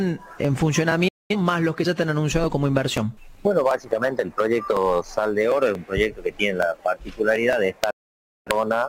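Single sharp clicks fall at 0.45, 3.71, 4.77, 5.75, 6.63 and 7.53 s. These are most likely dropped samples, each well under a millisecond of signal missing, so the waveform steps abruptly from one value to a later one without removing any audible sound. On a spectrogram each shows as a thin vertical line spanning all frequencies. In the waveform it is a tiny discontinuity in an otherwise smooth trace.

From 1.08 to 1.36 s the sound fades out over about 8 ms and stays silent for roughly 0.21 s. This is a digital broadcast dropout, where the receiver muted while it was not getting valid frames. A longer one runs from 7.90 to 8.51 s, with about 0.55 s lost after the same quick fade. Both gaps look like flat, empty blocks in the waveform and blank vertical bands on the spectrogram, with soft edges where the fade occurs.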